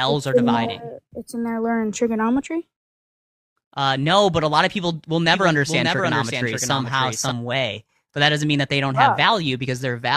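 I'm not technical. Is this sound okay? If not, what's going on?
No. From 5.26 to 7.32 s there is a doubled audio track: the same sound plays twice, with a second, somewhat quieter copy trailing about half a second behind. It starts and stops abruptly, likely from the audio being captured a second time through a slower path.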